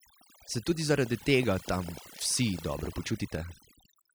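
From start to finish, the speech carries overdone noise removal. A noise reducer set too hard cut away frequency bands near its noise estimate. Soft parts of the voice vanished with them. The gaps hold near silence with twinkling specks.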